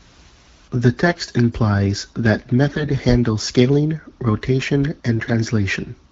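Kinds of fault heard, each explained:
AMR bit errors: corrupted low-priority bits slip past the frame checksum, misplacing excitation pulses and skewing pitch, gain and spectrum values. Near 1.06, 2.70 and 5.16 s the speech turns hoarse and gargly but keeps its pitch and level, unlike frame loss, which mutes or smears.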